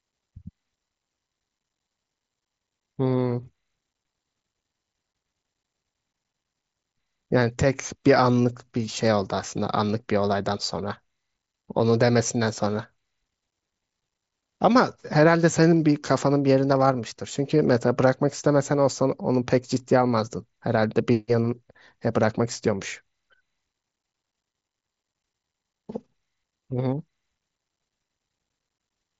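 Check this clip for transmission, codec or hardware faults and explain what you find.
Concealed Bluetooth headset packet loss occurs at 3.43 s, 15.29 s and 16.88 s. Each dropout, about 7.5 ms at the first two and 15 ms at the last, is patched by repeating the best-matching recent waveform, leaving the single losses nearly hidden. The path, which sounds like the wideband mSBC headset codec, carries speech up to 8 kHz with light graininess.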